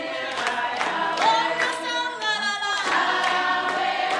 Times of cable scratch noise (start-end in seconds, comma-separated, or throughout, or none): none